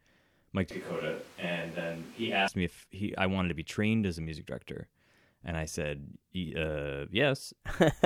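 At 0.71 s the speech turns suddenly roomy and hollow, losing bass, dropping by about 5 dB and sitting over a more noticeable room noise floor, roughly 20 dB below the speech. At 2.48 s it snaps back to the close, full sound just as abruptly. This is a switch to a distant microphone: the close mic's signal was likely lost or left out for that stretch, so a microphone farther away, picking up more room, carried the speech instead.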